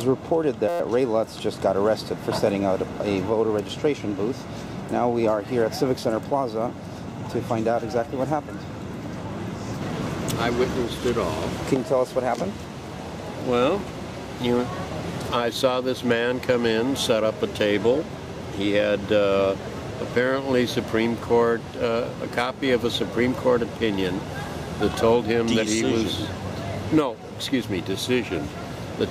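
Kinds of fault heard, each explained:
System hang loop: From 0.69 to 0.80 s the playback stalls and the sound hardware keeps replaying the same 5.8 ms slice of its ring buffer about 20 times. That fits a 256-sample buffer. Because the slice is so short, the repeats fuse into a steady buzz at 172 Hz rather than a stutter. Unlike a dropout, no silence appears, and virtually no audio seems lost before playback resumes.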